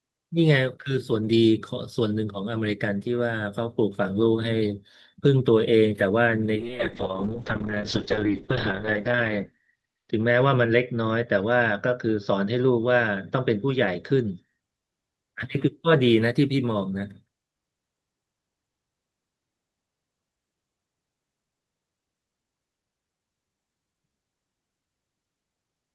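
From 6.6 to 14.65 s the call bitrate drops, as the encoder's budget falls from 32 to about 6 kbps, bottoming out for 2.4 s. The speech turns rough and watery, and its top end narrows from 12 kHz to 8 kHz, sounding muffled until recovery.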